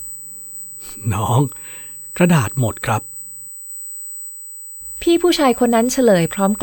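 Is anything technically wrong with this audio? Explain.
Yes. A USB whine runs through the entire speech clip, a steady tone at 8 kHz that sits only about 15 dB below the speech. The USB bus draws current in 125-microsecond microframes, and that rhythmic draw leaks into the audio through shared power or ground, producing a fixed-pitch whistle at 8 kHz. It is heard as a thin, piercing tone that persists through pauses. A spectrogram would show a straight horizontal line at 8 kHz spanning the whole clip.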